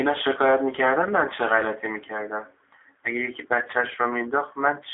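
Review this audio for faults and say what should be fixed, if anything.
Throughout, the speech sounds slightly rough and synthetic, thin with little below about 300 Hz and dull with nothing above 3.8 kHz. This is G.729 codec damage. The speech is rebuilt from a vocal-tract filter, pitch predictor and sparse pulses, consistent with 8 kbit/s G.729A. Prevent it by carrying the call over a wideband codec such as G.722 or Opus instead.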